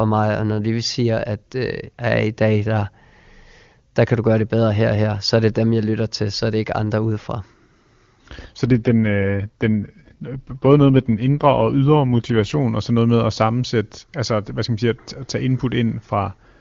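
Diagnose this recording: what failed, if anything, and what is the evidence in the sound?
AMR rate drop at the network stage, 8.66 to 12.58 s: speech goes rough and synthetic, fitting a fall to 8.85 kbit/s. The spectrogram keeps full bandwidth with no gap, but the harmonics blur.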